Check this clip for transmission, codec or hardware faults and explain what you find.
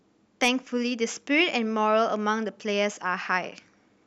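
Hard clipping occurs from 0.43 to 0.49 s in this speech clip. The signal there runs about 4 dB beyond what a stage in the chain can pass, so its peaks are sliced flat. Those squared-off tops add high harmonics, heard as a brief crackle on the loudest moments.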